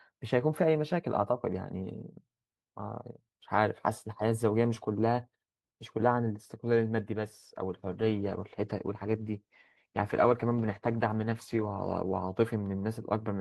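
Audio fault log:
7.94–12.09 s, call bitrate drop: the speech turns rough and watery for about four seconds, then clears. The call's bandwidth estimate fell and the encoder was held to far fewer bits, coding the signal more coarsely, which fits a fall from 32 to 15 kbps.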